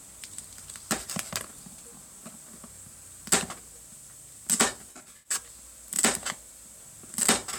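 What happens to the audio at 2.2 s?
At 2.25 s there is a repeated buffer: new audio arrived late, so the device played its last block again. The piece is only about 2.7 ms long, which fits a 128-sample buffer, so the doubled segment and its hard join come across as a brief click.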